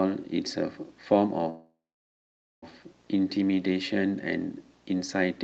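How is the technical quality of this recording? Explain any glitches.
The recording has one clear glitch, a call audio freeze from 1.49 to 2.64 s. The sound travelled over a call link whose codec cuts the top end at around 8 kHz.

The freeze was likely caused by packets arriving late, letting the receiver's jitter buffer run dry. With nothing new to play, the receiver stretched the last sound into a short fading buzz or hiss, then about 0.86 s of silence. Playback then resumes where it stopped, so about 1.1 s of gap is inserted with nothing lost.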